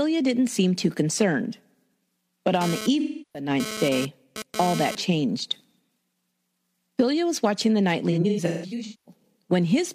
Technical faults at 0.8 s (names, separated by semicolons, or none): none